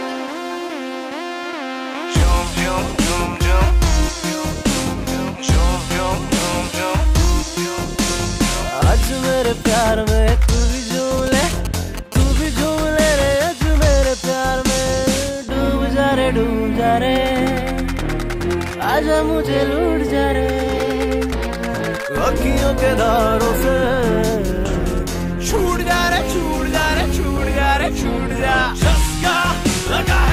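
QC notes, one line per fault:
11.18–12.46 s, GSM signalling bursts: a nearby 2G handset sends only short groups of radio bursts while signalling, and the audio circuit rectifies them. The result is a galloping dit-dit-dit of brief 217 Hz buzzes, fairly loud at roughly 10 dB below the programme.
12.58–14.94 s, GSM phone buzz: the handset has moved into a call and now transmits bursts continuously at 217 per second. The audio circuit rectifies each radio pulse, producing a steady, hard, raspy 217 Hz buzz rich in harmonics and unrelated to the audio, at about 25 dB below the signal.
24.74–25.93 s, GSM signalling bursts: the same signalling pattern returns as short, intermittent groups of rectified bursts. They are heard as clipped 217 Hz buzz fragments in a galloping rhythm, quieter this time at roughly 20 dB below the audio.
25.93–27.58 s, GSM phone buzz: with no gap after the signalling, the handset settles into continuous call transmission at 217 bursts per second. 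Demodulated by the audio circuit, this becomes a continuous raspy 217 Hz buzz with a dense harmonic series, sitting about 20 dB below the signal.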